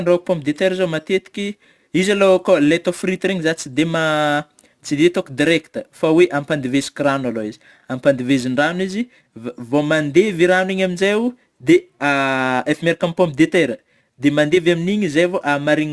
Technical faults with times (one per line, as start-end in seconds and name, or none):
0.00-15.92 aliasing